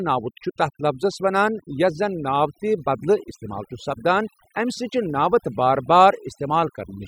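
Across the full length of the speech there is overdone noise removal: a noise reduction stage set far too aggressively, shutting down individual frequency bands whenever their level sits close to its noise estimate. Quieter parts of the voice fall below that threshold and vanish with the noise. Between phrases the background drops to near silence dotted with twinkling specks. A spectrogram shows scattered isolated blips in the gaps and ragged, hollowed-out harmonics.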